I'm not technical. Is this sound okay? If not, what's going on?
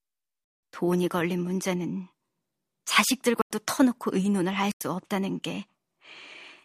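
No. Corrupt frame muted at 0.44 to 0.72, 3.41 to 3.51 and 4.53 to 4.81 seconds: damaged chunks of the compressed audio couldn't be decoded, so the player abruptly dropped in silence instead.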